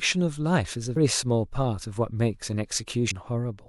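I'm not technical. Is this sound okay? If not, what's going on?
No. There is damaged data in a compressed stream: small parts of the file were corrupted, so the player lost its place, heard as short glitches at about 0.93 and 3.07 seconds.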